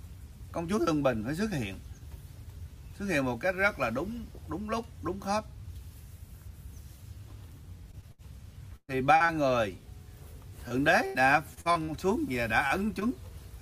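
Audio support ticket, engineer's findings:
Repeated packet loss (robotic sound), 7.91–9.31 s and 10.69–11.90 s. Choppy texture with pieces missing. Receiver jitter buffer and concealment: about six holes per stretch, each patched by extending the previous sound, the next loss arriving soon after. About a fifth of each span is synthetic fill, longest hole 120 ms in the first stretch and 83 ms in the second.

Short concealed packet loss, 12.68–12.72 s and 13.00–13.03 s. Brief smear or wobble at each point. Decoder concealment: roughly 20 ms of audio failed to arrive in time, so the receiver continued the last sound across the hole and blended back into real audio. Isolated events, each the length of about one packet.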